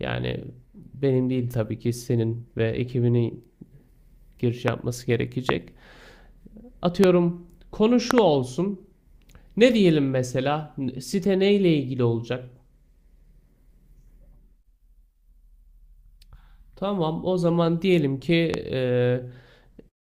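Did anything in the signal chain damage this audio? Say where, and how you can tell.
Yes, a loud pop fault, likely from an intermittent analogue connection or static. Sharp pops, roughly 20 dB over the sound, hit at 4.68, 5.49 and 7.04 s, a double pop at 8.11–8.20 s, and a softer one at 18.54 s, with speech continuing underneath each.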